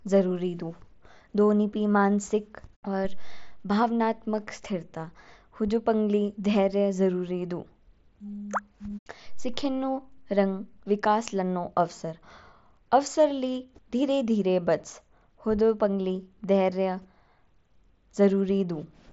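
Nothing in this speech recording points to a technical fault. It carries the sound of a Bluetooth mSBC headset codec, with nothing above 7.7 kHz and only a light grain from the coding.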